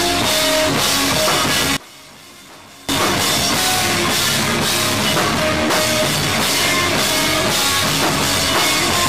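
From 1.77 to 2.89 s the mono sum collapses by about 23 dB, leaving only a faint residue of the sound. The likely cause is one channel inverted: reversed polarity on one side cancels everything common to both channels when they are summed.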